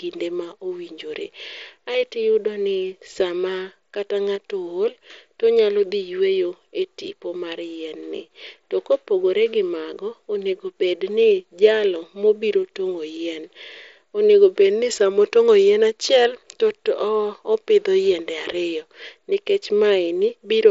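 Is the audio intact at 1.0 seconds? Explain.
Yes, at 1.0 seconds the speech is intact, carried over the Bluetooth mSBC headset codec with its band limit at about 7.7 kHz and no fault at that moment.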